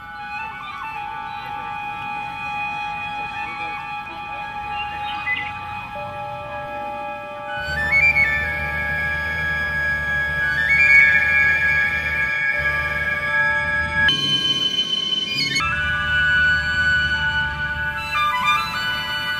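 From 14.09 to 15.6 s a section at the wrong speed plays 1.84 times fast, pitch jumping roughly ten semitones, likely from playback against a mismatched clock.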